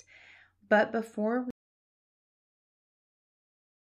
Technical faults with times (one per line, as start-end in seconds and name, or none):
1.50-3.96 audio dropout to silence